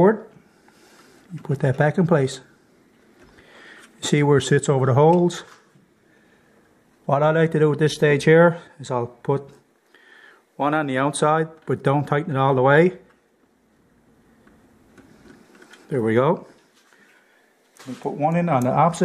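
From 4.38 to 6.75 s the audio slows 5.4% and drops 95 cents before snapping back, likely a drift correction step in clock-matching software.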